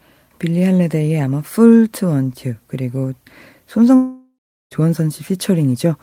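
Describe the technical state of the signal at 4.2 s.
Long network dropout, from 3.95 to 4.74 s: at 4.2 s the signal sits inside a gap of about 0.76 s where the original sound is missing entirely. The likely cause is a run of audio that never reached the receiver, so the player stretched the last received sound into a buzzy, fading continuation and then fell to near-silence for roughly 0.37 s. The audio resumes at 4.74 s with the lost portion simply absent.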